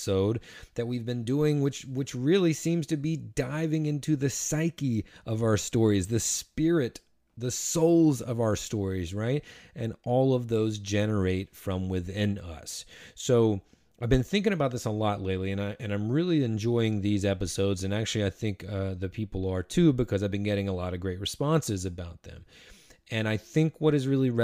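Nothing faulty turns up in this speech recording. There are no events to place in time and no problem to trace back to a cause.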